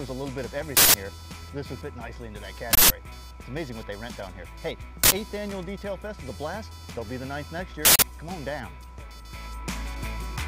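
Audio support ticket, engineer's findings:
Continuous buzzing/chirping under the audio, whole clip. Computer activity noise: CPU, GPU or mouse load currents modulating the shared audio ground. Pulse rate around 500 Hz, roughly 20 dB below the signal.

Distinguish from mains hum: not locked to 50/60 Hz harmonics, rises and falls with machine activity, independent of programme level. Probable component: onboard interface or ground path.

Loud digital noise bursts at 0.77–0.94 s, 2.73–2.90 s, 5.04–5.12 s, 7.85–8.02 s. Uninitialised buffer: block played before being written, stale memory output as samples.

Burst lengths about 171 ms and 85 ms, which fits 8192- and 4096-sample buffers at 48 kHz. Unlike dropouts, which give silence or clicks, the gap is filled with garbage. Probable component: playback driver/buffer handling.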